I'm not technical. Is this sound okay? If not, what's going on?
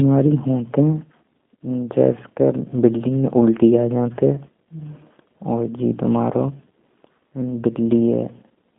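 No. From start to finish the speech goes through G.729 codec compression, a low-quality phone-call system. Instead of sending the real sound, it describes the voice's shape and pitch and then rebuilds it from a few pulses every few milliseconds. The result stays understandable but sounds plainly rough and slightly robotic. Everything above about 3.5 kHz and below 200 Hz is cut away, so the voice has the thin, boxy quality of an old phone line.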